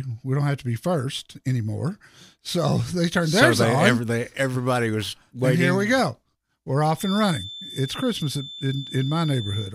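Right after "we go we're", at about 6.94 s, a feedback whistle comes in and runs to the end at 9.74 s: a thin, steady 3.5 kHz tone roughly 15 dB under the speech, swelling and fading slowly, likely a speaker-to-mic loop hovering just short of runaway.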